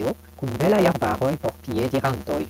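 A block size mismatch with truncation runs through the whole of this speech clip, from start to finish. One stage hands over longer blocks than the next stage takes in, and the tail of every block is discarded. The result is a steady buzz at about 138 Hz, the rate at which the blocks arrive. The speech also runs 1.6 times too fast while keeping roughly its normal pitch. That ratio fits 512-sample blocks being read as 320-sample ones.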